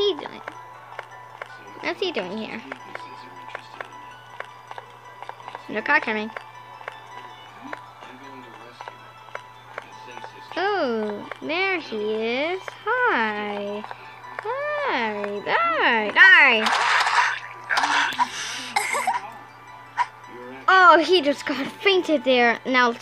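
Nothing in the audio stood out as a technical problem on listening.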